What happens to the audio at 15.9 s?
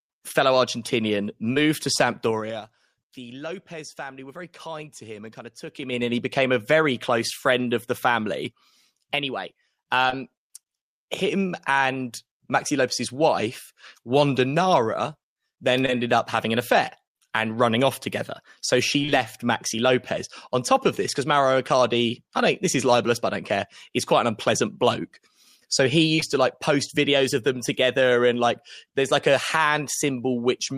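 A brief smear cuts into the speech between 15.86 and 15.90 s, a short wobble where a tiny piece of sound seems stretched rather than heard cleanly. This is short concealed packet loss: about 20 ms of the call arrived too late to decode, and the receiver covered the gap with roughly 21 ms of synthesised continuation of the preceding sound, carrying its pitch or noise shape forward before blending back into the real signal.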